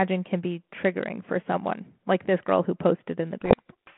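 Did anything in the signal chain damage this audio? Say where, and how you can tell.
Yes, at the codec stage: from 3.41 s to the end, the speech is buried in harsh distortion. This is a codec payload misread, with the G.726 code words read in reversed bit order. Unlike the milder coding noise of 32 kbit/s G.726, it starts abruptly and swamps the speech.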